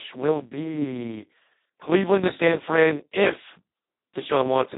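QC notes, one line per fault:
Throughout: Speex codec, squeezed hard. The speech comes out hoarse, noisy and edging into robotic, which is what CELP sounds like when it has almost no bits for the excitation. That fits a rate of around 2 kbps. Nothing gets above 3.9 kHz.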